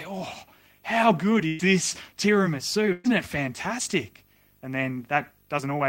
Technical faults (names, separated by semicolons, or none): video or display buzz; burst of packet loss